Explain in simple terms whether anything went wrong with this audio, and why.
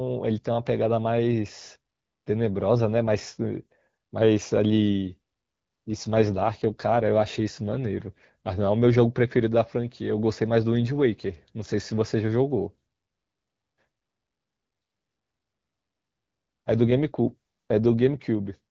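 Twice the phone network told the HD Voice codec to squeeze the speech into less data, probably because the radio link weakened. This is an AMR rate drop, and the freed-up data went to protecting the signal from errors. From 5.89 to 8.24 s and again from 16.79 to 18.26 s, the speech turns rougher and more synthetic. It never cuts out or goes muffled, and each time it clears once the network restores the higher quality setting.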